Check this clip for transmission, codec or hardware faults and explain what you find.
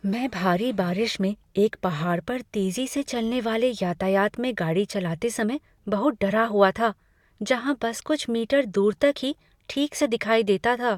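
Nothing faulty can be heard anywhere in this recording.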